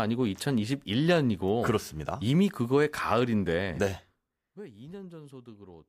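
No technical faults can be heard in this speech recording.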